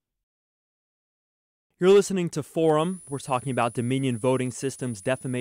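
Right after "listening to", at 2.79 s, a switching supply whistle comes in and stays to the end: a thin tone wandering between 9.70 and 10.01 kHz, roughly 25 dB under the speech, from a switching power supply running in an audible burst mode or beating with another one.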